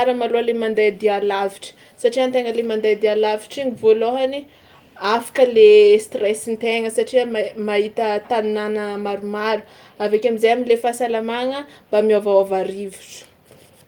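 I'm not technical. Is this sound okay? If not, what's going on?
Yes, it's fine: nothing in this recording sounds like it's gone wrong, so there's nothing here to worry about.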